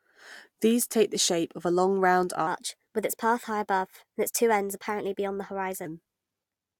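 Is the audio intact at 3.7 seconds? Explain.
No, a section at the wrong speed runs from 2.47 to 5.86 s, likely fitted to the wrong clock, playing 1.18 times fast, so speech rises about three semitones and hurries.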